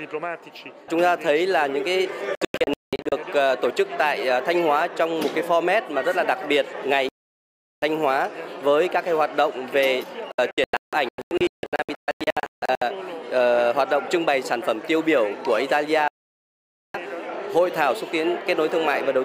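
The audio suffers digital broadcast dropout, muting to silence as frames fail: broken holes at 2.35–3.12 s and 10.32–12.82 s, solid gaps at 7.09–7.83 s and 16.08–16.95 s. Unlike concealment glitches, nothing is repeated or smeared; the programme simply resumes later.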